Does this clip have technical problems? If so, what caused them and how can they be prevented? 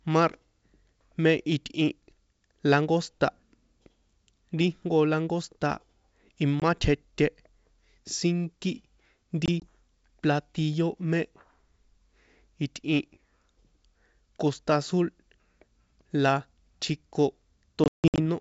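Yes. Short hard-edged dropouts cut the speech at 6.60 to 6.62 s, at 9.46 to 9.67 s just before "platillo mé", and at 17.84 to 18.20 s. Each is followed by briefly, slightly distorted speech. This is packet loss on an ADPCM call. The missing audio, about 20 ms, then 40 ms scattered over 160 ms, then 260 ms over 360 ms with one 160 ms gap, was replaced by silence. The G.722 decoder's predictor and step size then had to resynchronise, which causes the distortion at each restart. Keeping loss low with jitter buffering, forward error correction and packet-loss concealment would prevent this.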